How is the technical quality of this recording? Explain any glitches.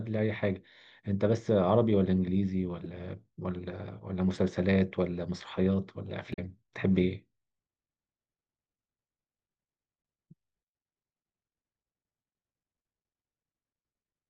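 The recording has three short glitches from damaged data in a compressed stream, at 2.84 to 2.86 s, 6.30 to 6.39 s and 10.00 to 10.02 s, the middle one being the longest at about 90 ms. Each time, corrupted bytes left the decoder unable to read the frames, so it lost sync and hunted for the next valid frame header. The result is a brief chirp or squawk cutting across the speech. On a spectrogram each event shows as a narrow vertical smear of broadband or oddly banded energy that breaks the smooth speech harmonics. In the waveform it appears as a short burst of garbled samples or an abrupt discontinuity.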